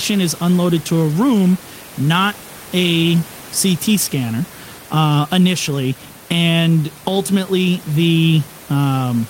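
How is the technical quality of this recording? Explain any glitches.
No glitches turn up anywhere in this speech recording, and the only thing underneath it is a bit of ordinary room noise sitting about 23 dB below the speech, which comes from the space around the microphone rather than the system itself.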